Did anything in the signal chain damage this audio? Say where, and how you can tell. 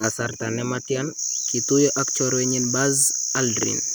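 No, nothing in the chain audibly damaged this speech recording, so there is no stage to point to.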